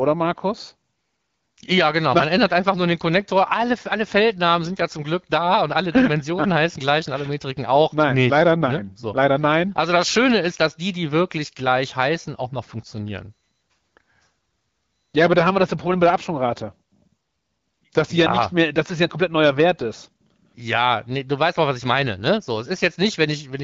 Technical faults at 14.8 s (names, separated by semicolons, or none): none